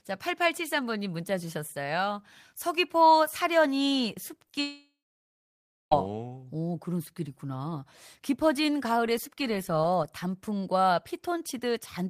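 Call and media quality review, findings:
Short concealed packet loss, 4.47 to 4.51 s and 4.51 to 4.55 s: two back-to-back late or missing packets, about 20 ms of audio each. The jitter buffer and decoder concealment extrapolated the last waveform across each gap, then cross-faded into received audio. Audible as a brief smear or wobble in the speech, with transient detail possibly lost, directly ahead of the larger failure.

Long network dropout, 4.61 to 5.93 s: stream interrupted for about 1.3 s, likely a network outage on the receive path. Concealment continued the last sound as a fading buzz or hiss for roughly a third of a second, then about 0.97 s of silence or low steady noise. Speech resumes at 5.93 s with the intervening audio gone, not delayed.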